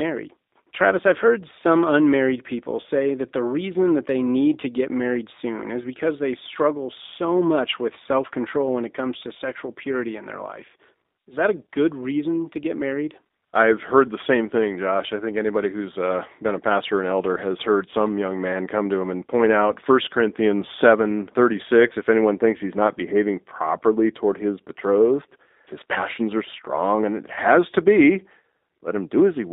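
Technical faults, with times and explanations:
Throughout: G.729 codec. The speech has the rough, slightly synthetic texture of a low-rate vocal-tract model. The decoder rebuilds each short frame from a filter, a pitch predictor and a few pulses rather than from the real waveform, so fine detail is lost and the codec damage is plainly audible. The band sits between about 250 Hz and 3.7 kHz, giving a thin telephone sound that fits an 8 kbit/s G.729A line.
21.89 to 21.93 s: VoIP packet loss concealed by the speech codec. Just before "if anyone thinks he's", the voice briefly smears into a buzzy tone or a coloured noise that fades. The gap points to one lost packet of about 20 ms. The decoder filled it by repeating its last pitch and filter at falling gain. Each frame builds on the one before, so the voice stays weak or distorted for tens of milliseconds or more past the gap, before the speech recovers.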